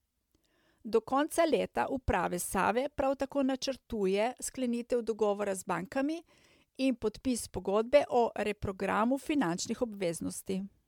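It's a speech clip with generation loss running the whole way through: swirly, hollow and smeared, with blurred attacks and nothing above 19.9 kHz, worse than a mid-bitrate MP3 alone would sound. The likely cause is roughly seven rounds of MP3 re-encoding around 136 kbit/s, with the damage stacking up on each pass.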